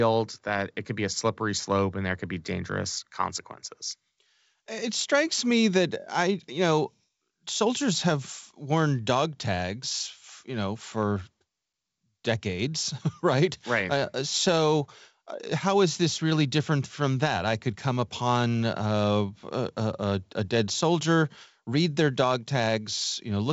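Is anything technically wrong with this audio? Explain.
No, nothing is technically wrong: the speech comes through G.722 wideband telephone coding at 64 kbit/s, which leaves the audio band-limited with nothing above about 7.7 kHz, as that coding normally does.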